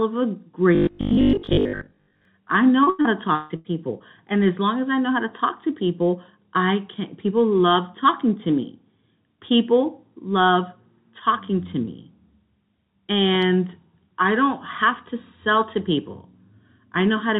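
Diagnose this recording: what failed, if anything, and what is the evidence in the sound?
Robotic sound from repeated short buffers, 0.75 to 2.25 s, just after "of a": the speech collapses into a rigid, metallic buzz at 50 Hz that still loosely tracks the syllables. That buzz frequency means a 20 ms chunk was being replayed over and over, with most of the stretch made of repeats rather than new audio. The likely cause is a driver or buffer stage starved of input, looping its last block while real samples were skipped.

Repeated packet loss (robotic sound), 2.84 to 3.68 s: the speech turns choppy and metallic, broken by a quick run of dropouts, the longest about 151 ms. Each hole was patched by stretching the preceding sound, so nearly half of this span is synthesized fill and the missing pieces are simply gone. This points to the network stage, with packets lost or arriving too late for the jitter buffer. 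Across the call path, nothing reaches above 4 kHz, consistent with a G.711 narrowband codec.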